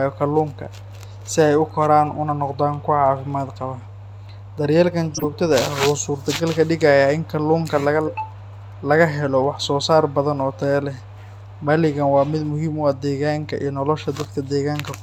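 Mains hum runs through the whole speech clip: a steady 50 Hz tone, about 20 dB below the signal, from power-line coupling such as a ground loop or nearby transformer. At 5.14 to 5.24 s a corrupt frame decoded produces a short burst of chirpy noise, roughly four damaged compressed frames played with misplaced spectral energy.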